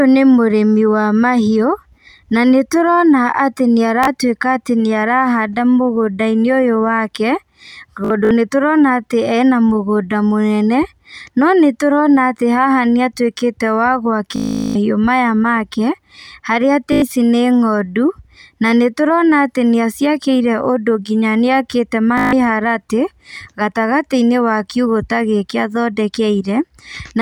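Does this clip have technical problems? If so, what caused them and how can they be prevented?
Yes. Bluetooth stutter hits the speech at 4.04 to 4.07, 8.05 to 8.31, 14.36 to 14.75, 16.93 to 17.02 and 22.18 to 22.33 s. Lost packets made the receiver repeat its last slice, causing buzzy stutters. Keep devices close and away from interference.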